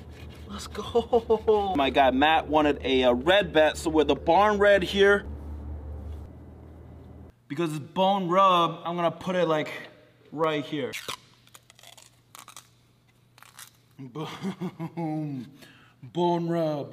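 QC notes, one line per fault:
2.75 s and 10.44 s, dropped samples: a sharp, isolated click at each point. The likely cause is that a tiny run of samples, a fraction of a millisecond, went missing from the stream, so the waveform leaps from one value straight to a later one. That abrupt step carries energy across the whole spectrum for an instant, heard as a single tick and seen as a thin vertical line. Too little is lost to remove any audible sound.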